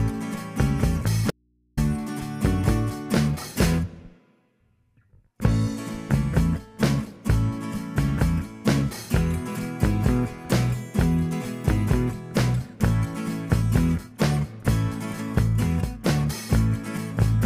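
At 1.31 s the sound cuts off abruptly and, for about 470 ms until 1.77 s, all that remains is a low mains hum sitting far beneath the program level, roughly 40 dB down, before the audio snaps back mid-flow. This is an audio dropout to a faint residue. The likely cause is that the wanted signal was lost upstream while the rest of the path stayed live, so the open input exposed its hum instead of falling silent.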